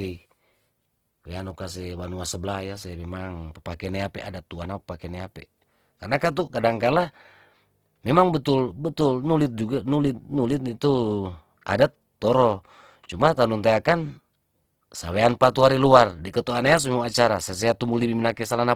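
Throughout the speech, the sound is rough and grainy, with a hissy texture where fine detail should be, likely from Opus compression in its music mode at a bitrate near 16 kbps. A spectrogram would show fullband energy with few gaps, upper bands filled by coarse noise instead of clean harmonics.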